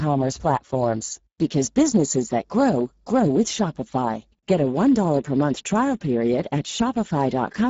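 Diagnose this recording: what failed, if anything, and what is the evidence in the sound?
The failure is at the codec stage: Speex coding damage is plainly audible throughout the speech, with nothing above 7.7 kHz. That fits a Speex mode near 10 kbps, where the CELP coder has too few bits to model the excitation accurately, roughening the speech.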